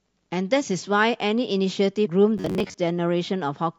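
At 2.05 to 2.07 s, damaged data in the compressed stream throws the decoder off: it misreads the corrupted frames, loses its place and has to hunt for the next valid frame header before it can resume. What reaches the ear is a brief glitch lasting only about 20 ms.

From 2.38 to 2.75 s comes robotic sound from repeated short buffers. Fresh audio is likely arriving too slowly, so the playback side keeps looping the last fragment of roughly 10.7 ms to fill the gaps while genuine speech is dropped, with something like half of this stretch made up of repeats. That fixed loop length stamps a steady 93.8 Hz buzz onto the speech, giving it a stiff, metallic drone that still loosely tracks its rhythm.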